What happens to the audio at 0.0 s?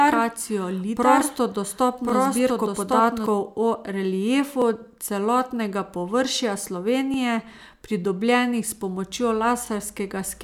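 From the very start until 3.26 s the speech is heard twice, a second equally loud copy trailing about a second behind: a doubled audio track, likely from a second, slower capture path.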